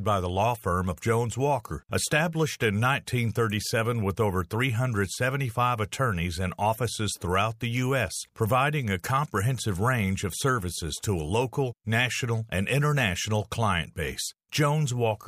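No technical faults can be heard at any point in the recording, and the speech signal stays intact and continuous throughout.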